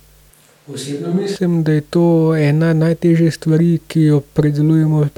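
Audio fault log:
0.30–1.36 s, switch to a distant microphone: the speech abruptly turns hollow and roomy, thinner in the bass and about 5 dB quieter, with room noise rising to roughly 35 dB below the speech, then snaps back. The close microphone likely dropped out, leaving a farther one.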